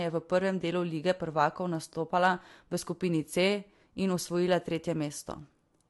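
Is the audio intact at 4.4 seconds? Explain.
No. At 4.4 seconds the speech carries transcoding between lossy codecs, present across the whole clip. The sound was likely encoded once and then re-encoded, in a way that fits a Vorbis pass near 65 kbit/s followed by AAC-LC near 64 kbit/s. The second encoder spent bits reproducing the first one's artefacts while adding its own, so both are heard together: swirly, watery high frequencies over a dulled top end. On a spectrogram the upper band stops at a flat ceiling, with patchy, flickering energy just below it.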